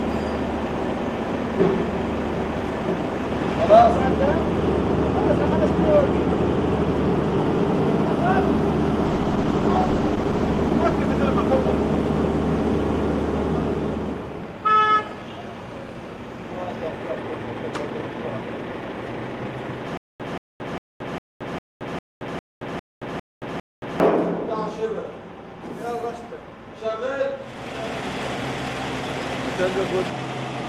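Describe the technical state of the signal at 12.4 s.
At 12.4 s the signal is inside a call bitrate drop running from 9.07 to 13.03 s. The encoder's budget fell sharply. The sound fits a rate near 13 kbps, down from about 48. Coarser coding makes it rough and muffled, with highs cut.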